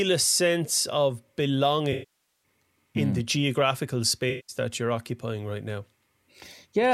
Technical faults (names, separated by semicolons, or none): AAC frame loss with concealment